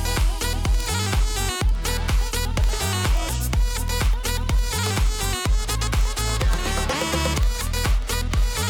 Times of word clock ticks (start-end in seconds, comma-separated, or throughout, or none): 0.15-8.67